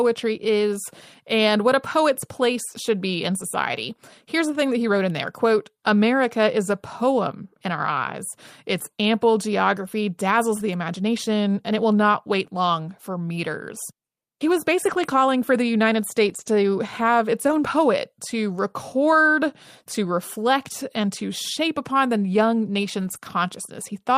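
Lost packets rebuilt from error correction occur at 3.39–3.41, 10.59–10.61, 14.85–15.11, 16.29–16.47, 17.47–17.61 and 22.99–23.17 s. Low-bitrate copies carried in following packets fill each loss, so the speech has no gaps but turns briefly rough and noisy.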